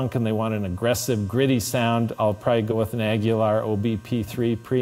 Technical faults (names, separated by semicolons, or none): compressed frames skipped